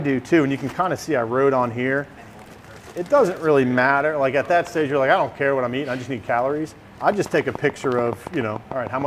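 From 7.12 s to 9.03 s a train of clicks runs over the sound, around fifteen sharp ticks at a regular rate of about 6.9 per second, each peaking roughly 10 dB above the surrounding audio. The cause is likely interference from nearby equipment or a faulty connection or power supply injecting pulses of much the same shape. On the waveform they stand out as evenly spaced narrow spikes; a spectrogram shows matching thin vertical lines spanning the full frequency range.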